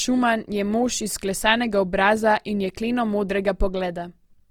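From start to finish the speech carries the smeared, watery texture of a heavily compressed source, although content runs all the way up to about 20.2 kHz. That mismatch is the mark of low-bitrate audio saved at a high bitrate: the sound points to a low-rate Opus encoding, around 24 kbit/s, likely re-encoded to MP3 at about 256 kbit/s. The second pass added almost nothing, but it could not restore detail the first pass had already discarded.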